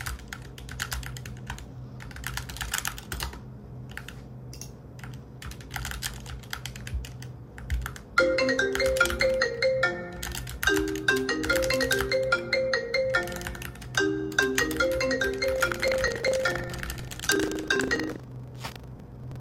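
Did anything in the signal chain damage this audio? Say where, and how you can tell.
Yes. The damage is at the driver or buffer stage. From 15.52 s to the end of the clip there is a steady robotic rattle at 25 Hz, which fits a buffer period of about 40 ms. This is buffer tearing. The writing program and the hardware reading the ring buffer have slipped, so they cross inside each period. Roughly a tenth of every buffer replays audio about 70 ms old, with a hard splice on both sides.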